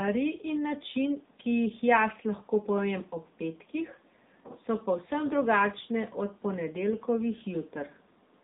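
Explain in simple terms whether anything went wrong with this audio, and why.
The speech was squeezed through the AMR narrowband mobile codec, the compression phones use for ordinary calls, and it stays that way from start to finish. The codec rebuilds the voice from a simple model of the mouth and throat and throws away everything above about 3.8 kHz. That is why the voice sounds thin and muffled, like a phone call, with a plainly audible buzzy, artificial edge.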